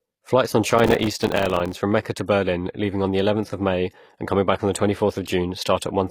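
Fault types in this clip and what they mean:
HE-AAC compression: The treble sounds rebuilt rather than captured, likely from HE-AAC coding at a low bitrate near 24 kbps, with upper bands copied from lower ones. Sibilants come out gritty and metallic, and nothing is present above 15 kHz.
processor overload crackle: The processor misses its buffer deadlines again and again, leaving dozens of tiny silent gaps, each a few milliseconds long, which fits a buffer of about 3 ms. From 0.71 to 1.75 s these gaps merge into a dense, tearing crackle over the speech.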